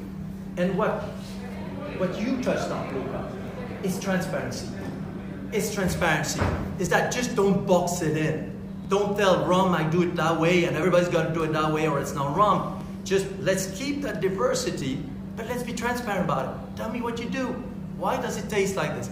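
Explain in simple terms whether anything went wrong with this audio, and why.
Something did go wrong: there is a small click or skip at 0.91, 2.90, 4.89, 6.87, 8.85, 10.83, 12.81 and 14.82 seconds, roughly every two seconds. This is overlap between stream segments. The audio arrives in two-second chunks, and where neighbouring chunks wrongly claim the same moment, a few thousandths of a second of real sound are cut out. Unlike a dropout, nothing goes silent. The sound simply jumps forward at each chunk boundary.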